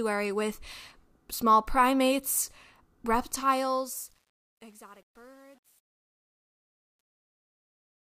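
Truncation distortion on a fade runs from 3.22 s to the end at 8.05 s. The fade-out beginning around 3 s is stepped rather than dithered, which fits a 9-bit stage. From 4.03 s the quiet speech turns gritty.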